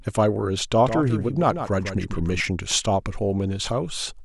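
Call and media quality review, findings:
Doubled audio track, 0.82–2.40 s: dry full-band copy of the speech about 150 ms late, roughly 10 dB down, abrupt on and off; likely a slower second capture path mixed in.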